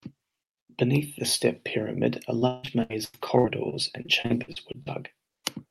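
Repeated packet loss (robotic sound) from 2.39 to 4.88 s: lost packets leave a string of holes, each filled by stretching the last sound, so speech turns choppy, with gaps up to 161 ms.

Jitter buffer slow-down from 4.38 to 5.16 s: the receiver repeats single pitch periods to rebuild its reserve, playing at 96% speed, adding 36 ms and drawing sounds out at unchanged pitch.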